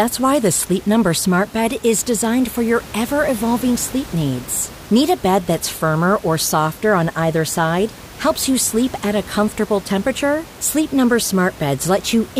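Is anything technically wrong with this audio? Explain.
No, no technical faults.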